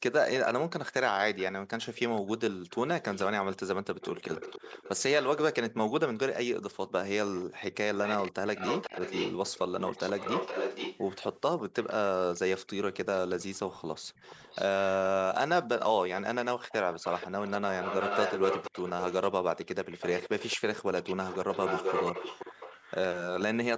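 An echo leak, likely from a far-end canceller passing its loudspeaker pickup back, returns the speech 479 ms late: faintly at 1.37–5.40 s, 7.35 s and 13.15–14.90 s, nearly as loud as the original at 8.03–12.39 s and 16.19–23.42 s.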